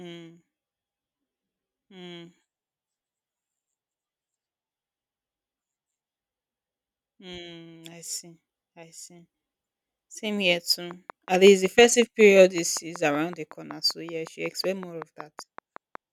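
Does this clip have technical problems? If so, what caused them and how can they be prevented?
Yes. Likely interference from nearby equipment or a faulty connection or power supply causes a train of clicks from 10.91 to 15.96 s: about thirty evenly spaced pops, 5.35 per second, rising a few decibels above the speech. Keep cables shielded and away from other equipment, and use a stable audio interface.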